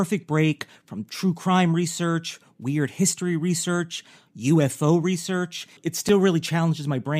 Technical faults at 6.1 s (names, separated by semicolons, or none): gap between stream segments